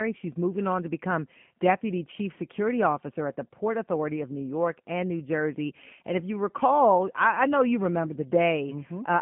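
Speech, and it's been through the G.729 codec for the whole clip, with plainly audible damage. Everything lives between about 150 Hz and 3.4 kHz, so it's got that thin phone-line sound. The roughness and slightly synthetic edge come from the codec rebuilding each 10 ms frame from a vocal tract filter, a pitch predictor and a handful of pulses. All of that fits the G.729A flavour running at 8 kbit/s.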